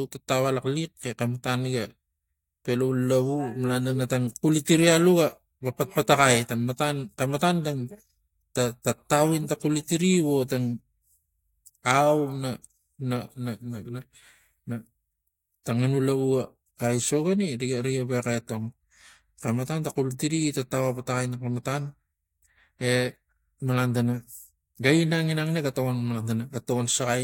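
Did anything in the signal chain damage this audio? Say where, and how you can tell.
No, nothing in the chain seems to have touched this speech recording; I can't hear any point where it was damaged along the way.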